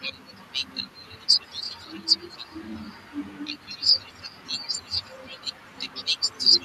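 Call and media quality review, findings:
Echo leak, 0.89–2.08 s: delayed copy of the speech trailing by 215 ms, roughly 15 dB below the direct signal. Likely far-end loudspeaker pickup not fully removed by the echo canceller, with the residual sent back. Recurs from 3.25 s to the end at the same 215 ms lag, much fainter, around 30 dB down. Unlike room reverberation, this is a discrete repeat at a fixed lag, not a smooth decaying tail.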